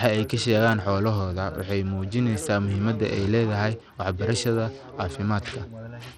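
A speech clip carrying Bluetooth SBC compression damage for its whole length. The upper frequencies thin out and flicker while a gritty grain sits on the sound, likely from the SBC codec starving its top sub-bands, which fits a low bitrate near 80 kbps.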